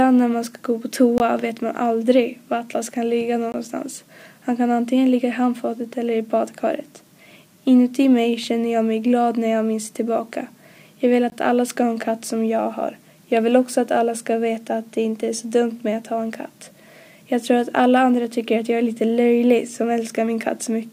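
A block of digital silence occurs three times, at 1.18 to 1.20 s, 3.52 to 3.54 s and 11.30 to 11.32 s, each lasting 20 ms. Each time, the output drops instantly to zero and returns with no fade, leaving a brief hole. Because every gap is the same length, an output buffer of about that size was probably not filled in time and went out empty.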